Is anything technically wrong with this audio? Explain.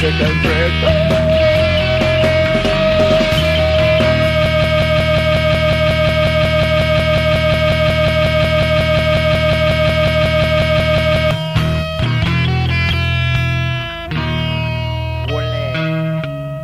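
Yes, there's a broken-record loop from about 4.46 s to 11.31 s. A short fragment, roughly 0.18 s long, repeats exactly and back to back, around 38 times, so you get a rapid stutter instead of the audio moving forward. The likely cause is the player, encoder or stream stalling and resending the last chunk it had buffered. Whatever should have played during those nearly seven seconds is gone.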